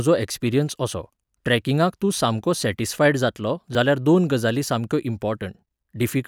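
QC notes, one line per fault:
3.75 s, dropped buffer (overrun): a small forward jump in the speech and no gap of silence. A few milliseconds of audio are missing, likely because the capture buffer was overwritten before it was read, leaving the two edges butted together.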